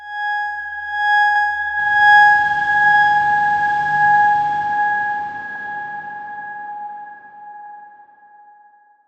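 At 1.36, 3.45, 5.55 and 7.65 s the audio has overlapping chunks. It was handled in 2-second blocks, and each block begins 100 ms before the previous one finished, so a tenth of a second replays at every join, ending near 1.46, 3.56, 5.66 and 7.76 s. The result is a regular click or stutter. On a waveform or spectrogram, the same 100 ms pattern appears twice side by side, with a hard edge at each seam.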